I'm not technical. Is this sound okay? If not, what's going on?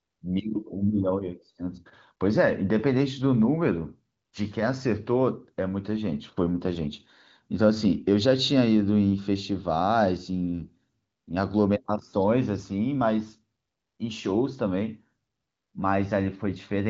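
Yes, the speech comes through without any technical faults, carried by the AMR wideband (HD Voice) phone codec, which keeps it clear while leaving out the highest frequencies above about 7.5 kHz, as phone calls normally do.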